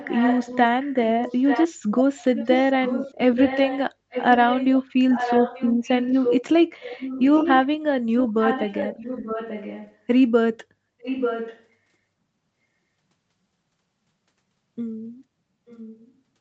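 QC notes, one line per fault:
0.00–1.68, 2.35–6.43, 6.81–7.67, 8.19–9.97, 11.00–11.64 and 15.67–16.12 s, echo leak: a distinct copy of the speech returns about 0.89 s late, likely from a far-end loudspeaker the echo canceller failed to suppress. It is strongest at 2.35–6.43 and 11.00–11.64 s and faint at the end. Unlike room reverberation, it is a separate repeat at a fixed delay rather than a smooth decaying tail.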